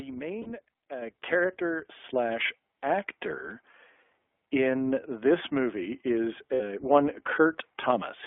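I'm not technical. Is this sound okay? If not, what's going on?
No. The whole recording sounds thin and boxy, like an old phone line, with a slightly rough, artificial edge. That comes from the iLBC codec, a compression method built for internet phone calls. It keeps only a narrow slice of the sound, from about 300 Hz to 3.5 kHz, so anything higher or deeper is simply missing. It also rebuilds the sound in short 20 ms pieces, which is where the synthetic roughness you can plainly hear comes from.

Twice the sound briefly smears into a held, slightly buzzy hum instead of the real sound. The first is at about 0.42 to 0.48 s. The second is at about 6.54 to 6.61 s, right after "in this movie is". These are lost iLBC frames. Bits of the call never arrived, so the decoder repeated the last little stretch of sound to fill the hole. The gaps are about 40 ms and 60 ms long, which fits two and three missing pieces. 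Clean sound returns almost immediately afterward.

At 1.02 s, 2.04 s and 3.06 s, everything suddenly gets louder in one step, background included. The first jump is the biggest. This is the microphone volume stepped up. The calling software decided the microphone was too quiet and turned its input level up abruptly, three times in a row, rather than smoothly.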